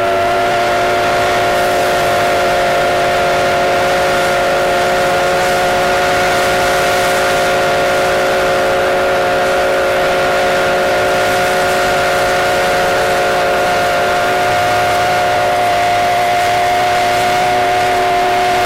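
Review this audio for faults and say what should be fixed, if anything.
Nothing here needs fixing; no faults were found.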